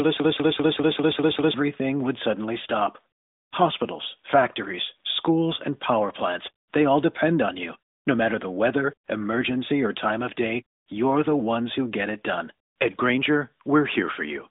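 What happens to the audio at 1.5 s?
At 1.54 s a broken-record loop ends. It was already running when the clip begins, repeating a 0.2 s fragment seven times back to back, so the speech that belonged in that first second and a half never plays. The likely cause is a stalled player or stream resending its last buffer. On a waveform the identical 198 ms shape tiles regularly. The spectrogram shows the same narrowband pattern, stopping near 3.8 kHz, stamped out at even spacing until normal speech resumes.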